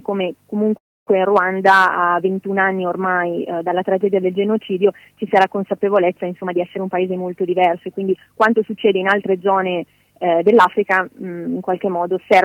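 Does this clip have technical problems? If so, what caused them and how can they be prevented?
Yes. From 0.77 to 1.09 s the sound stops for about 0.3 s, with a brief fading tail before near-silence, then resumes where it left off. This is a call audio freeze, likely from delayed packets emptying the jitter buffer. Unlike packet loss, nothing is skipped. Steadier network paths and a slightly deeper jitter buffer would help prevent it.

From 6.41 to 9.34 s a jitter buffer speed-up plays the audio at about 110% speed, trimming roughly a third of a second of pitch-period pieces to shed the backlog. The pitch stays put, which rules out a sample-rate error. Smoother packet delivery and gentler buffer adaptation would prevent it.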